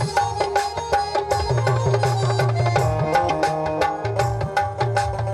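At about 3.28 s there's a short burst of damaged data in a compressed stream, lasting roughly 30 ms to 3.31 s. A stretch of the encoded bytes came through wrong, so the decoder either misread those frames or threw them out, lost its place, and had to hunt for the next valid frame header before carrying on. What you hear is a quick glitch cutting into the sound right there before it picks back up.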